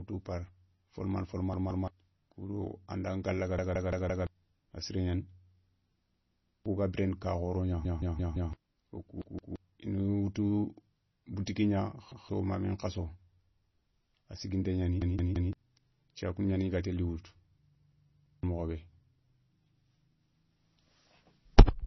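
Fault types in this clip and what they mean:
MP3 compression: heavy, likely low-bitrate MP3, with nothing above 5.9 kHz and a watery swirl, unlike a plain low-pass filter's clean dullness.
repeated buffer: the same 171 ms piece, which fits an 8192-sample buffer, plays one to four extra times, a hard-edged stutter rather than a silent dropout.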